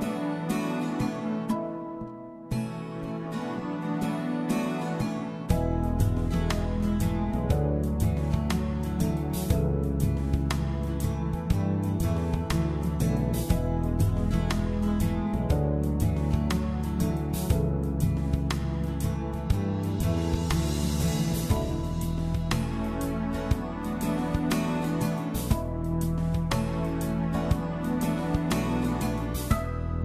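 No technical faults can be heard anywhere in this recording.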